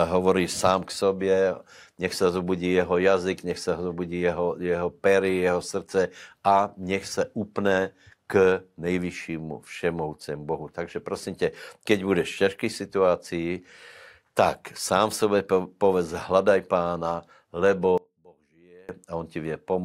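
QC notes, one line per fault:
17.98–18.89 s, one channel inverted: for just under a second the speech all but disappears when heard in mono, dropping by about 29 dB before returning at full level. The likely cause is one stereo channel flipping polarity, so the centred voice, being identical in both channels, cancels when left and right are summed. What survives is only the small difference between the two sides, a faint residue rather than the full voice.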